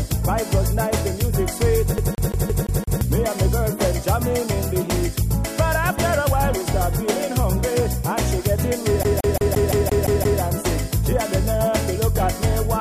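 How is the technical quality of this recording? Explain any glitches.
Two skips spoil it: a CD stuck on one turn at 1.98 to 3.01 s (six repeats) and again at 9.03 to 10.41 s (eight). A scratch keeps kicking the laser back a track, so the same 0.17 s slice replays with a tiny mute at each jump, giving that quick, even stutter.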